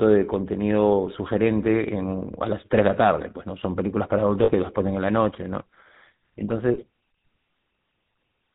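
From the start of the speech to the end, the audio carries the GSM full-rate codec sound, consistent with the 13 kbps full-rate mode. The codec rebuilds the voice from a vocal-tract filter excited by a sparse, regularly spaced pulse train, discarding most of the excitation detail, and it passes nothing above 4 kHz. The damage is plainly audible: a buzzy, gravelly roughness over the whole voice and a dull, band-limited top end.

Two lost GSM frames events interrupt this. The first is from 4.44 to 4.51 s and the second from 6.74 to 6.85 s. Each gap fits roughly two 20 ms frames being dropped. The decoder filled each gap by repeating the last good frame's parameters. Instead of a clean cut, the sound hangs briefly as a rough, metallic ringing before normal decoding resumes.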